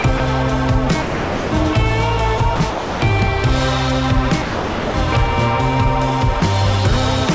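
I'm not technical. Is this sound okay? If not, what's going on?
No. The sound briefly gives way to a flat, steady hiss and then comes back: split-second blips at 0.02, 0.18, 2.38 and 6.40 seconds, a slightly longer one from 2.56 to 2.60, and longer gaps from 1.02 to 1.52, 2.70 to 3.02 and 4.42 to 4.94 seconds. This is likely sound dropped by the voice detector. The sending side mistook real sound for background, stopped transmitting, and the receiver filled the gap with artificial comfort noise. The call path's cut-off above 8 kHz also makes the sound a little dull.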